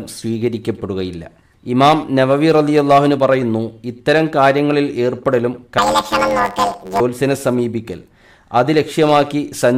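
From 5.78 to 7.01 s, planar audio read as interleaved gives a robotic buzz near 86 Hz. Blocks of about 11.6 ms, fitting 512 samples, play left-then-right, scrambling the sound.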